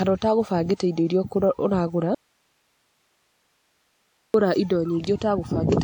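A speech recording carries the artefacts of lossy coding throughout, and nothing is present above 20.1 kHz. That points to low-bitrate audio saved at a high bitrate: a coarse encode, likely around 64 kbit/s WMA, re-saved as a roughly 320 kbit/s MP3 that cannot restore what was lost. From 2.15 s to 4.34 s the speech cuts out abruptly for about 2.2 s, leaving only hiss around 45 dB below the signal. This is an audio dropout to a faint residue, likely a break in the signal path while the later stages stayed live.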